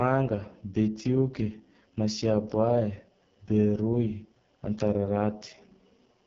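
AMR wideband (HD Voice) codec damage runs through the whole clip, and it is heavy. The speech is rebuilt from a pulse-excited vocal tract model with very few bits to spend, so the voicing comes out rough and raspy, which fits the codec's lowest 6.6 kbit/s mode. The top of the band is filled with synthetic noise rather than real detail, and nothing remains above 7.5 kHz.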